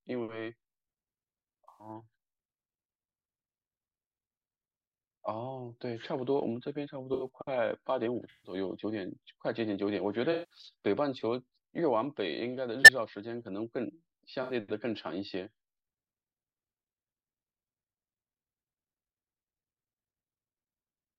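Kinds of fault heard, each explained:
Corrupt frame concealed: damaged AAC frames in this speech were caught by the decoder and papered over with a muted or scrambled stand-in at six points, 1.68, 7.14, 8.30, 10.32, 12.82 and 14.43 s, lasting from about 0.07 s to 0.28 s, the longest consistent with several consecutive frames.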